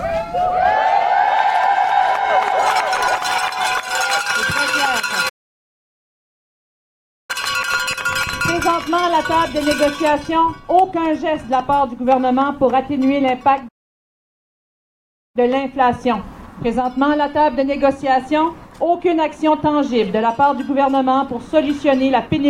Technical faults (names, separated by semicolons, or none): doubled audio track; playback stall